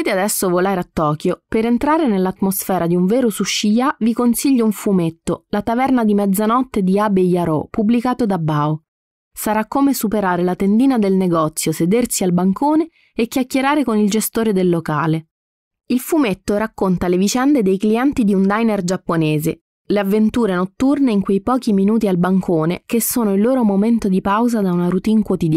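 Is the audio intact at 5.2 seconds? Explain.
Yes, the audio is intact at 5.2 seconds, with no dropout, glitch or other technical fault at that point.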